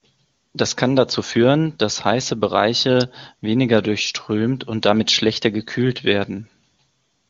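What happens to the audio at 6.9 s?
Nothing goes wrong at 6.9 s: the speech there is intact, carried by AMR wideband (HD Voice) coding at a rate high enough that no roughness or rasp is heard.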